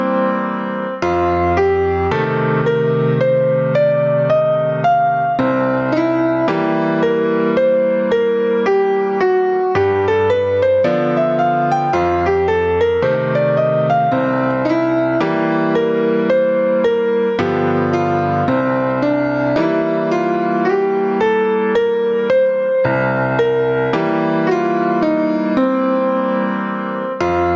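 Gain pumping runs through the whole clip, with a gain swing of around 15 dB. The likely cause is input gain set far too high and a fast limiter clamping each peak, squashing loud and soft passages together. The call microphone processing band-limits the audio, with nothing above 8 kHz.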